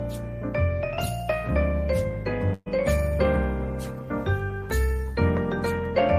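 At 2.53 s there is a burst of packet loss lasting until 2.68 s. Several packets never arrived in time. The receiver stretched the last sound for about 124 ms, fading it, then briefly fell silent. About 120 ms of audio is skipped.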